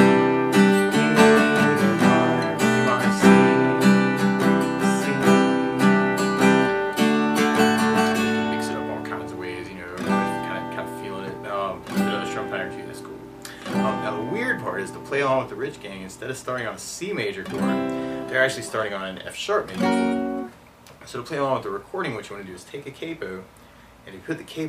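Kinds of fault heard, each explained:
No technical fault can be heard anywhere in this audio. There is nothing to list under any heading here.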